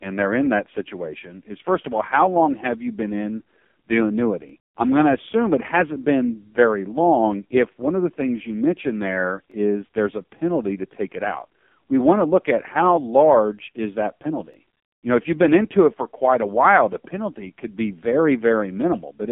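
From the first second to the end, the speech runs through an AMR narrowband mobile codec at a low 5.15 kbps, and the damage is heavy. The line is squeezed to roughly 150 Hz to 3.5 kHz, so nothing above 3.5 kHz survives and the voice comes across thin and muffled. At that bitrate the vocal-tract model gets very few pulses per subframe, which gives the whole thing a buzzy, synthetic, robotic edge.

On top of that there are three overlapping chunks, spaced about 5 s apart, which points to the audio being handled in 5 s blocks that each start slightly before the previous one ends. The first is at 4.49 to 4.52 s, just before "I'm going to assume". The next is at 9.52 to 9.54 s, between "things you mentioned there" and "is there's a penalty". The last is at 14.54 to 14.56 s, right after "how large is that". At each join about 21 ms of audio plays twice, and you hear it as a quick click or stutter in the flow.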